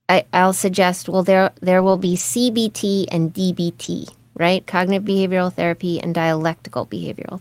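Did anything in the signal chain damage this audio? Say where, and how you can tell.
Yes, at the network stage: lost packet rebuilt from error correction, at 1.79 to 2.21 s and 3.83 to 3.89 s. The audio never drops out but turns rougher and noisier, as the decoder played low-bitrate backup copies carried in the following packets.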